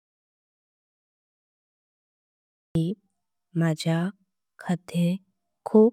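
From the very start to 2.75 s there is an audio dropout to silence. The gap is silent, with no room tone at all. The input was likely lost while recording continued, writing silence. Speech then cuts in mid-flow, and anything said earlier is gone.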